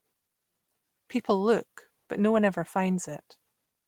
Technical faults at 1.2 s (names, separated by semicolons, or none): none